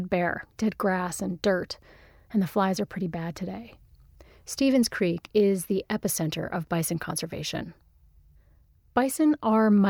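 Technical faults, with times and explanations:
No technical faults are audible in this speech.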